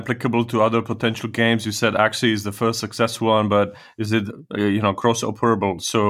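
Nothing here to flag, since the speech runs through without any technical fault turning up along the way.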